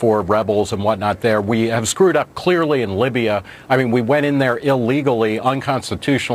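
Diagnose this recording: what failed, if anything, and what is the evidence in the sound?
The converter stage failed: its sampling clock shows sample clock jitter of a few microseconds, so each sample lands slightly early or late. Throughout the sound, a roughness sits about 35 dB below the signal, strongest on loud, bright passages, where steep waveform slopes magnify the timing errors.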